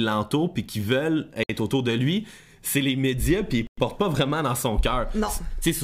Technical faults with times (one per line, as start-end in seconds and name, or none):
1.43-1.49 Bluetooth stall
3.67-3.77 Bluetooth stall